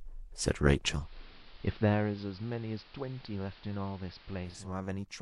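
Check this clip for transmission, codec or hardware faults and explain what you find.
One fault is present: a digital radio blending to analogue, from 0.88 s to 4.75 s. At 0.88 s the speech goes dull and a steady hiss rises, sitting roughly 25 dB below the voice, though loudness stays the same. A hybrid receiver lost its digital signal and cross-faded over about 0.32 s to the station's AM broadcast, whose narrow bandwidth and noise floor account for the muffling and hiss. At 4.75 s it blends back to digital.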